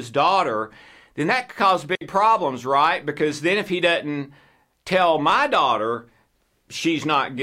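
At 1.95 s, right after "then that could cause" and before "problems right", the speech drops into a clean hole of near silence lasting 60 ms. This is a digital wireless dropout: the receiver lost too much data and muted with a very short fade, leaving no noise burst either side.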